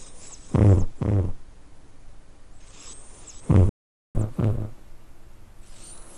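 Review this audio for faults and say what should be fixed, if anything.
A doubled audio track runs throughout: a full-band copy trails by about half a second, roughly 5 dB quieter, likely from a second capture path. On a spectrogram, every event repeats as a fainter, undecayed twin offset to the right. Route the source through only one capture path, or mute the duplicate input.

A playback stall silences the output from 3.69 to 4.15 s, a 455 ms gap, likely because the player ran out of buffered data. The waveform drops flat to zero, with a blank vertical band on the spectrogram. Give the player a deeper buffer or keep its audio thread from being blocked.

Catch-up at higher speed follows from 4.15 s to the end: the backlog plays 1.15 times fast, raising pitch about two semitones. Spectrogram harmonics shift visibly upward and events compress in time. Drop or skip the backlog instead of resampling it, or use time-stretching that preserves pitch.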